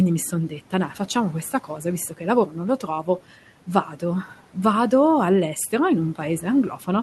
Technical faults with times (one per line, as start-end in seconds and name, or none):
2.79-3.24 speech cut by the noise suppressor